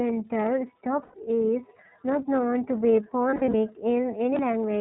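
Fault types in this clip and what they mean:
iLBC codec: This narrowband VoIP codec codes each 30 ms frame independently, here at 13.33 kbps, cutting everything above 4 kHz and leaving this speech plainly rough and synthetic. A spectrogram shows a hard ceiling at 4 kHz with smeared, grainy harmonics below.
Lost iLBC frames: Dropped packets make the decoder repeat the last pitch cycle mixed with noise, heard as a held, buzzy vowel near 1.02 s and after "not known to be" at 3.29 s. Spectrograms show frozen, flat harmonic bands; the waveform shows repeating periods, recovering almost at once.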